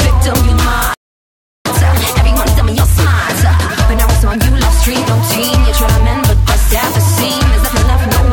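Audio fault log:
0.94–1.66 s, playback stall: the music cuts off mid-flow for about 0.71 s, likely because the player ran dry of buffered data or its thread was blocked. The waveform drops to a flat line and the spectrogram shows a clean, empty vertical band before the music resumes.
1.66–4.66 s, time-compressed catch-up: for three seconds the music runs about 1.15 times fast at unchanged pitch, as the player trims its backlog by cutting and cross-fading short slices. Spectrogram events sit closer together while harmonic lines keep their frequency.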